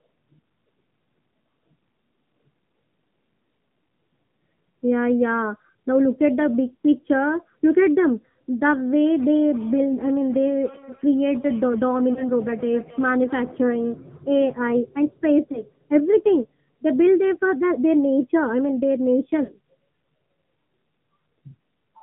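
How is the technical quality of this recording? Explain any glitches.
The recording has narrowband mobile-phone sound throughout and three brief dropouts from lost frames.

AMR narrowband mobile codec: nothing above 4 kHz survives, and the buzzy, synthetic speech fits a low AMR-NB mode near 7.4 kbps. That buzz sets it apart from plain band-limiting.

Lost AMR speech frames: at 12.14–12.24 s and 15.52–15.63 s, a short warbly dip fits one concealed 20 ms frame. At 19.44–19.53 s, a drawn-out smear fits two frames. The decoder repeats the last pitch and vocal-tract settings at fading gain instead of leaving the clean silence of a hard dropout.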